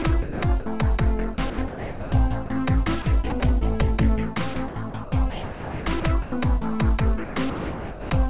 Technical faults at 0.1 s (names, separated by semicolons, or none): sound chopped by the voice detector